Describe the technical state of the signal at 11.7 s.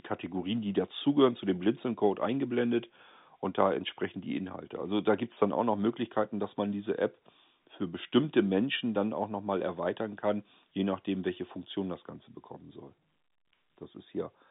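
At 11.7 s the signal is intact, carried in an ordinary G.711 telephone band with nothing above about 3.8 kHz.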